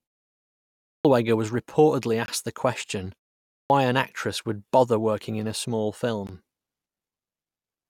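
Speech with two kinds of fault. A clipped start after a pause occurs twice. At 0.75 s, after 0.75 s of silence, the first 0.30 s of sound is swallowed. At 3.45 s, after a 0.34 s pause following "the question", about 0.25 s is missing before "an actress would bother". In both cases the sound begins abruptly, without its first sounds, because the output device had gone idle in the silence and needed time to wake and lock again. Ordinary pause muting would only fade the background and keep every syllable, so the lost onsets rule it out. A gap between stream segments appears at 2.26 to 2.28 s, a 21 ms hole of hard-edged silence between "was reportedly" and "the question", and again at 6.27 s, about 19 ms after "working in a small". Nothing is lost here. The time stamps of consecutive 4.0 s segments leave a gap that the player fills with silence, so the sound stops and resumes where it left off. 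A dropout would remove material instead, and the two holes recur at the 4 s segment spacing.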